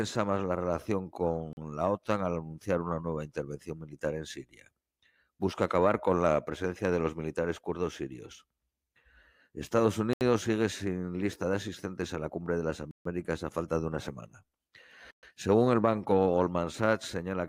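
The speech drops abruptly to dead silence four times, then resumes mid-flow: at 1.53 s for 40 ms after "más la relación", at 10.13 s for 76 ms just before "sigue sin lista de", at 12.91 s for 143 ms between "la cumbre de las" and "a falta de una", and at 15.11 s for 122 ms. These gaps are likely Bluetooth stalls, where interference delays packets and the headphone buffer empties until the retransmissions arrive.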